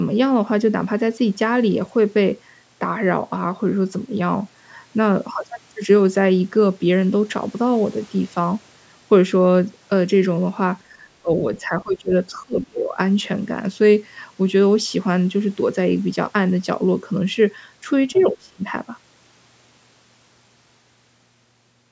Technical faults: speech suppressed in double talk; other side's voice leaking through

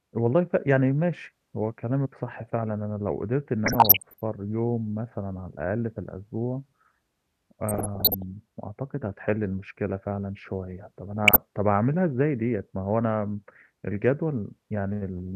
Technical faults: DAB burbling

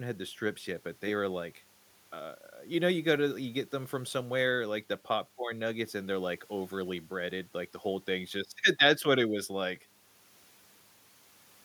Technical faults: none

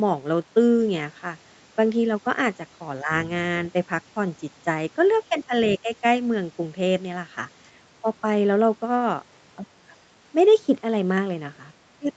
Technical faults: speech suppressed in double talk

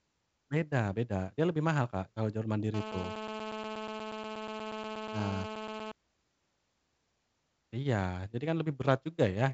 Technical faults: GSM phone buzz

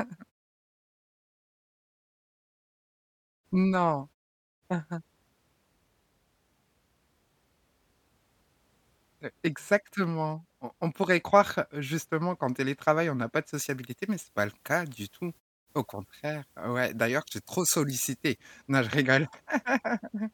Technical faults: pre-emphasis left on

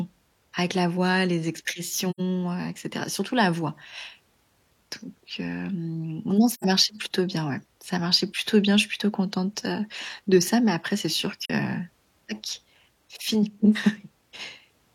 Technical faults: AAC frame loss with muting

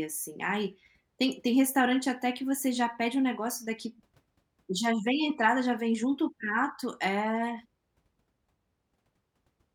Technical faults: none

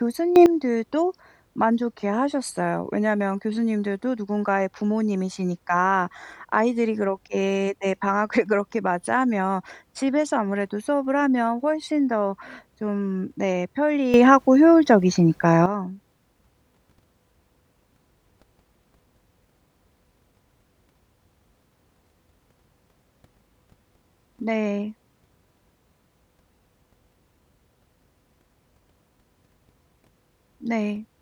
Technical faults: sudden gain jump

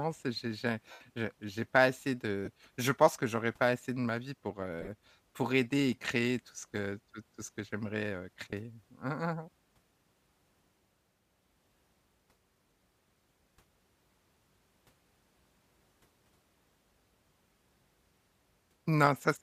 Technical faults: lost LE Audio frames

